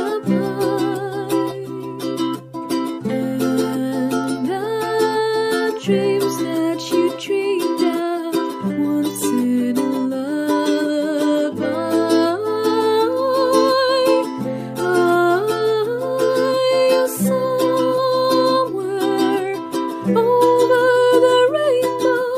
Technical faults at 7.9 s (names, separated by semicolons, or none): none